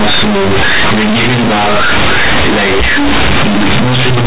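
Right from the start the speech is companded audio read as linear: mu-law bytes played as raw 8-bit samples, so everything's blasted, buzzy and noisy even in pauses.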